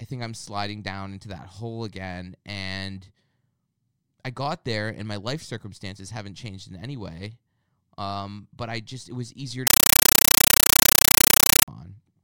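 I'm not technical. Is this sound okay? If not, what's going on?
No. From 9.67 to 11.68 s the speech turns into loud chattering static, about 31 bursts a second. That's a compressed stream played as audio, likely undecoded Dolby Digital.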